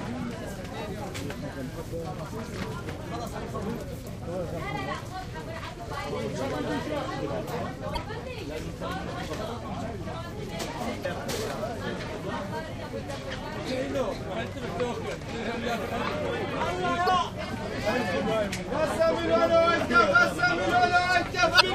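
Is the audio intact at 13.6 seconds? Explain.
Yes, the audio is intact at 13.6 seconds, with no dropout, click, distortion or other fault at that moment.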